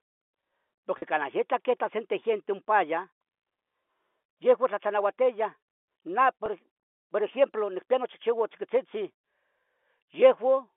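At 0.98 s, just before "canah yeta queta sente", and at 6.46 s, packet loss with pitch repetition leaves a 40 ms and then a 20 ms gap, which fits two lost 20 ms packets and then one. The concealment repeats the last pitch period, so each gap sounds like a brief buzzy hold over the narrow telephone band rather than the silent hole or click of a plain dropout.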